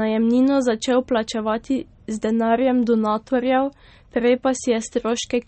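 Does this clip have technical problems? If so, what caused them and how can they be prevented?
Yes. Throughout, the speech sounds watery and swirly. The likely cause is MP3 compression at a starved bitrate, around 32 kbps, which zeroes weak frequency lines frame by frame and cuts everything above 8.4 kHz. A spectrogram shows this as a flat ceiling with flickering gaps below it. Prevent it by encoding at a higher bitrate or keeping a lossless master.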